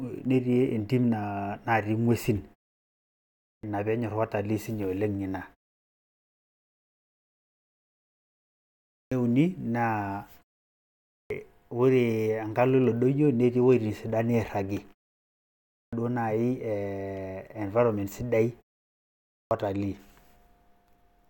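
After each pause, speech returns clipped at the start, at 3.27, 8.74, 10.94, 15.54 and 19.1 s. The output wakes late and swallows roughly 0.36 to 0.41 s of opening sound.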